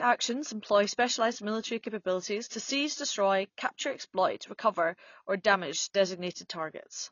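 From start to finish the speech sounds dull and smeared, with a warbly, fizzy edge on sibilants and nothing above 6.9 kHz. The likely cause is AAC compression, with AAC-LC at a low bitrate, consistent with around 24 kbps, discarding the upper band and thinning quantised detail.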